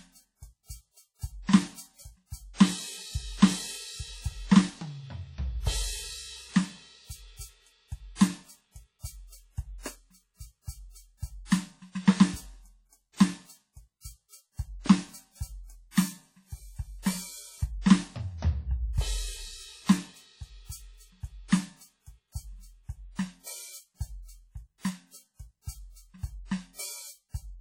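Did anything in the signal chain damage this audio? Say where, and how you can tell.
Yes, at the codec stage. The music carries heavy coding damage from start to finish. It sounds ringing and washy, and a hiss rises and falls with the music. Nothing is left above about 18.5 kHz. The likely cause is WMA compression at a low bitrate, which fits something near 32 kbps. This transform codec quantises long blocks coarsely, smearing noise over tens of milliseconds and zeroing weaker spectral lines.

The same codec produces pre-echo at about 17.02 to 17.06 s. A short hiss arrives roughly 37 ms ahead of a sharp attack, and the attack itself sounds softened. The encoder spreads quantisation noise across a whole block. Here the attack fell late in its block, so noise sized for the loud hit also filled the quiet gap just before it.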